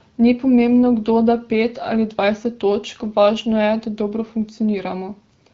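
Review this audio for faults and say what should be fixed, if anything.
No faults turn up in this audio, so nothing needs to be fixed.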